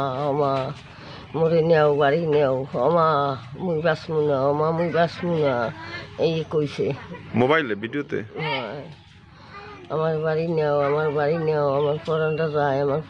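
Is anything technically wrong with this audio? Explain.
No, nothing is technically wrong with this audio.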